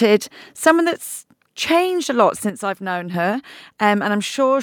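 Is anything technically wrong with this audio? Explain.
Yes, there are three faults. From 0.66 to 0.70 s, a harsh crackle hits the loudest peak. This is likely microphone overload, with peaks about 3 dB past the converter's limit and their tops flattened.

At 1.02 s, voice and background drop together by about 4 dB. This likely reflects the microphone volume being stepped down by the call software right after that clipped peak.

From 2.50 to 3.14 s, just after "a lot", the level falls abruptly by about 6 dB. One channel likely drops out, leaving only half the shared signal in the mono sum.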